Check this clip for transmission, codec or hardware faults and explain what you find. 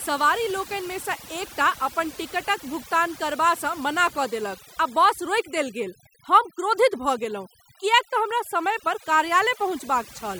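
The one problem here is overdone noise removal, and it runs through the whole clip. A noise reduction stage was pushed too hard, so any frequency band that dips close to its idea of the background noise gets pulled way down or shut off entirely, taking the quieter parts of the speech along with it. You hear it as a lowered background that breaks up into little twinkling specks.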